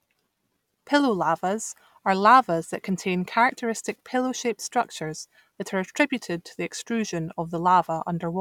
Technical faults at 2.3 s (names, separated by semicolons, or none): none